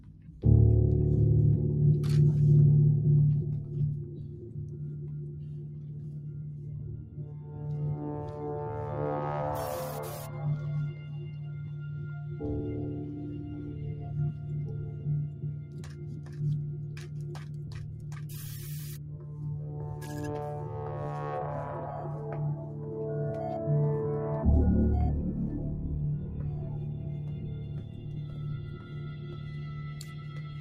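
Throughout, a noise suppressor applied to music or sounds treats held tones and tails as noise, dipping them by around 10 dB while attacks survive, unlike compressor pumping.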